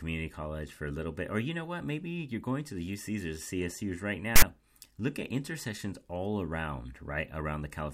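At 4.36 s, a block of text metadata is decoded as though it were sample data, the fault known as file tags played as audio. The bytes of tag text are interpreted as waveform values, so for about 60 ms, until 4.42 s, the speech is replaced by a loud, rasping burst pushed off to one side of zero. It starts and stops with hard edges, like a sudden stab of static.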